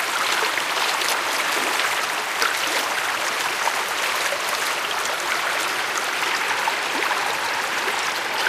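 At 0.54 s the audio jumps forward, and it does the same at 7.97 s. Both are compressed frames skipped: about two whole frames of 92.9 ms each never reach the output, so roughly a fifth of a second of sound goes missing each time. At each join the sound lurches ahead.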